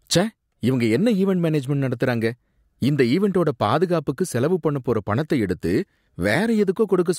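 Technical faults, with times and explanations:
No technical faults can be heard in the clip.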